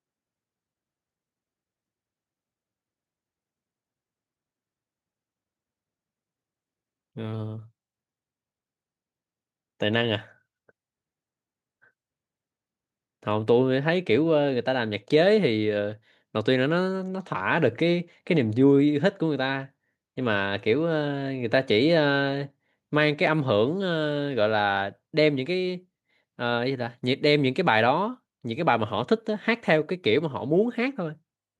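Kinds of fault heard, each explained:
Nothing here calls for an entry, since no technical fault turns up anywhere in the recording.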